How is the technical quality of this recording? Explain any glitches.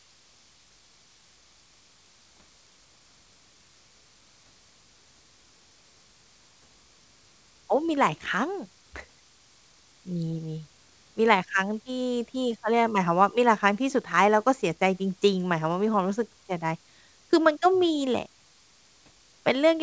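Listening closely to the speech, nothing stood out as a glitch, with the call path behaving as a wideband codec of this kind does and carrying nothing above about 8 kHz.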